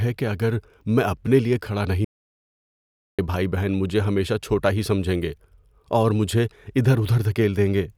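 The input feed to the recorder was likely lost for a moment while writing carried on, producing an audio dropout to silence in this speech clip from 2.05 to 3.19 s: after "میں اپنے لیے کھڑا" everything stops dead, with no room tone, for about 1.14 s, resuming at "بہن بھائی مجھے ہمیشہ".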